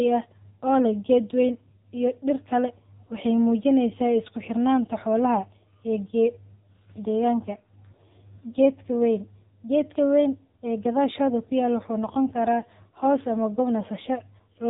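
From start to finish the speech carries AMR narrowband mobile codec damage, and it is heavy. Nothing above 3.8 kHz survives, which makes it thin and boxy. The low-rate vocal-tract model, which fits about 6.7 kbps AMR-NB, rebuilds each frame from a few pulses, giving a buzzy, synthetic edge.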